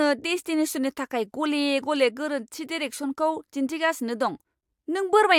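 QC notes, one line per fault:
No faults to note.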